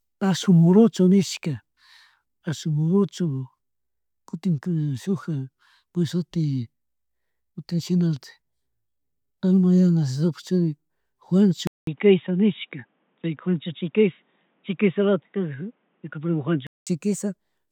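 At 11.67 s the speech drops out for about 200 ms, then comes back dull and boxy, with nothing above 3.8 kHz and a faint new noise floor sitting well under it, though the level stays about the same. That holds until 16.87 s, when the full, brighter sound returns. It's likely an input switched to a poorer device, something like a headset in call mode, whose narrower band and own noise briefly replaced the original microphone.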